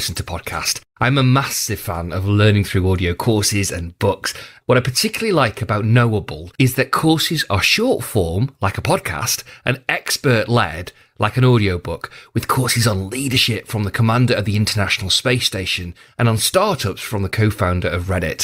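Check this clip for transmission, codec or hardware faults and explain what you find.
Nothing in the recording stood out as a fault on listening.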